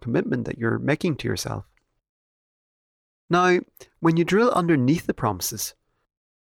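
A speech recording, and nothing is technically wrong with it.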